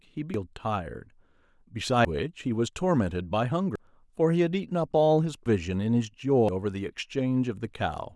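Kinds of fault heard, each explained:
Dropped buffer (overrun): the speech jumps forward at 0.34, 2.05, 3.76, 5.46 and 6.49 s, and there is no silence at any join. The first jump skips about half a second and the others roughly 150 ms each. The likely cause is the hardware overwriting samples before the program read them. Unlike an underrun, which leaves a gap or repeat, audio simply goes missing.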